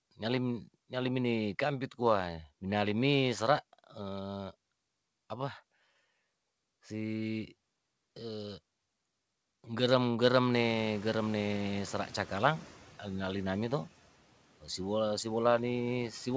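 At 10.53 s the room noise jumps sharply and the noise suppressor is caught up, its noise estimate trailing the change. Until 12.8 s the noise passes through too loudly, then sinks by about 6 dB over those 2.27 s as the estimate catches up.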